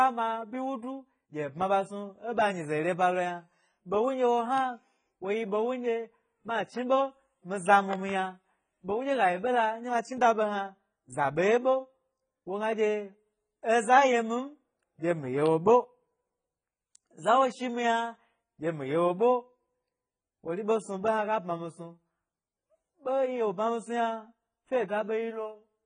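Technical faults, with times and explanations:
Throughout, AAC compression: nothing reaches above 9.6 kHz, and the sound is dull and smeared, with a warbling, fizzy edge on sibilants. This fits heavy AAC-LC coding at about 16 kbps, likely the cause. A plain low-pass filter would sound dull but clean, without this grain.
4.58 to 4.60, 7.93 to 8.11 and 15.46 to 15.48, loud pop: sharp pops about 15 dB above the sound, a close pair at 7.93, likely short voltage pulses such as static or a switch. The speech continues underneath, unlike a dropout.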